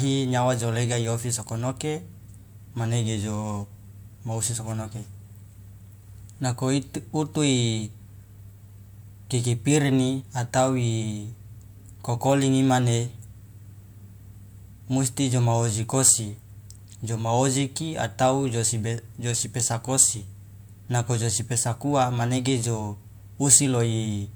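No technical faults are audible.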